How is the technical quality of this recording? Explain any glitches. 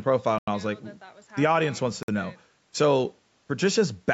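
There are two short dropouts in the speech, at 0.38 to 0.48 s (about 92 ms of silence) and 2.03 to 2.08 s (about 54 ms), both likely a Bluetooth stall. The headphone buffer empties while delayed packets are resent, so the sound cuts out and then resumes.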